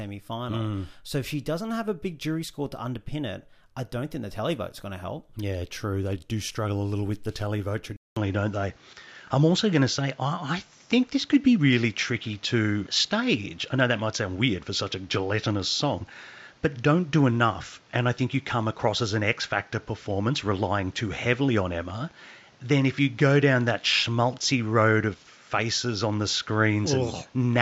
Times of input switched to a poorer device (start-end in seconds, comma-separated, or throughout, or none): 7.96-27.62